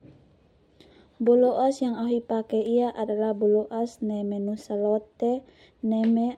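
A short speech recording, and nothing technically wrong turns up anywhere in it, so there's nothing to flag here.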